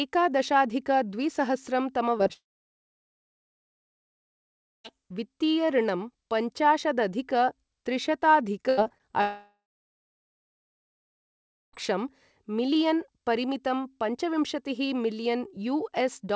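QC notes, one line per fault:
2.18 s, 2.23 s and 2.27 s: short concealed packet loss. Three packets, about 20 ms each, arrive too late. The receiver bridges each gap by extending the preceding sound and then blends back. Each gap is heard as a quick smear or wobble, and these come in a close burst.
2.33–4.92 s and 9.21–11.75 s: long network dropout. The last sound carries on as a fading buzz and then goes silent for about 2.4 s and 2.1 s respectively. The audio resumes later with roughly 2.5 s of speech gone. The likely cause is a network stall.
8.69–9.14 s: repeated packet loss (robotic sound). Five gaps of up to 80 ms come in quick succession, and a third of the stretch is patched audio. Each fill runs straight into the next gap, which makes the sound choppy with pieces missing. The G.722 call path already limits everything to below 8 kHz.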